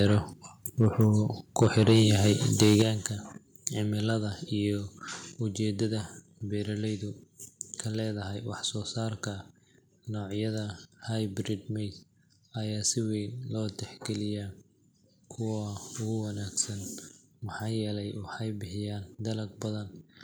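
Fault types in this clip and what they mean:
Microphone overload: Speech peaks, likely driven past the converter's limit, flatten at the top, show as squared-off waveform tops and broadband smear, worst at 1.61–2.33 s.
Microphone volume stepped down: Right after the last distorted burst, at 2.83 s, level drops about 8 dB, likely an automatic input cut, seen as a sudden waveform shrink.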